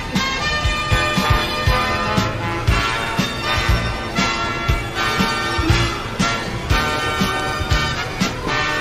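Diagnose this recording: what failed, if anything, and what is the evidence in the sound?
Nothing here points to a failure at any stage of the chain; it's just sound arriving the way it was captured, with no dropouts, clicks, level jumps or other damage to point at.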